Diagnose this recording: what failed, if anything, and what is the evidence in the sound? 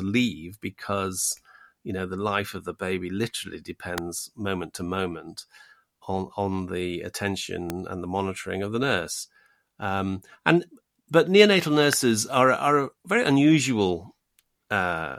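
Electrical switching spikes at 3.98 s (after "of the baby literally"), 7.70 s (before "and the monitoring of") and 11.93 s (after "and but neonatal"): sharp snaps sitting on top of the speech, peaking about -10, -10 and -5 dBFS, likely from nearby switching arcs picked up on the analogue wiring.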